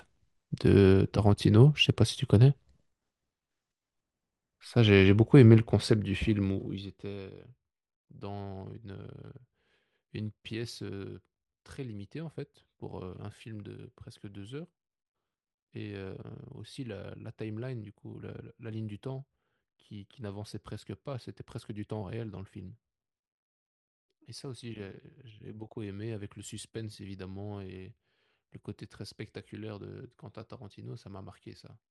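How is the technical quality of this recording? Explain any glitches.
No glitches or technical faults can be heard anywhere in the speech recording. The level rises and falls smoothly in places, like a fader being moved, and those changes are gradual and even.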